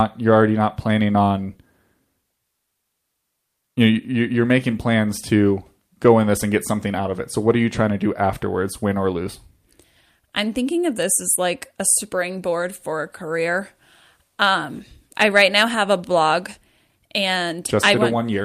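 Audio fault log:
No fault can be heard anywhere in the speech; the signal stays continuous for its whole duration.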